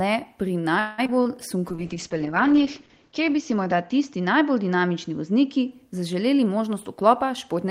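From 0.79 to 1.38 s, just after "le pri", repeated packet loss gives the speech a choppy, robotic sound. Four gaps open in quick succession, the longest about 187 ms. Roughly half of that stretch is patched by stretching the previous sound, and about 60 ms simply drops out. Unlike a single dropout, the holes keep recurring, which produces the choppy stutter.

From 1.70 to 5.78 s, a call bitrate drop makes the voice rough and muffled. The sound points to the encoder falling from about 32 kbps to around 8 kbps, with the worst stretch lasting about 1.4 s. The top end narrows from 20 kHz to 8 kHz. Nothing goes missing, which is what separates this from packet loss: the audio stays continuous and only its quality coarsens.

From 6.40 to 7.65 s, a jitter buffer speed-up makes the speech run about 8% faster. Short pitch-period slices add up to roughly a tenth of a second removed. The pitch stays unchanged, so this sounds hurried rather than chipmunk-like, unlike a resampling error.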